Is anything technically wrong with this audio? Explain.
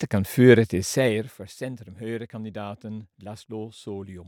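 Yes. From 0.75 to 1.52 s the speech carries zipper noise: the level drops by roughly 15 dB, but in discrete jumps at around 50 steps a second rather than as a continuous glide. Each jump is a tiny discontinuity in the waveform, so a fine ticking or buzzing rasp rides on the speech while the level falls. A smooth fade dips the level with no ticking at all.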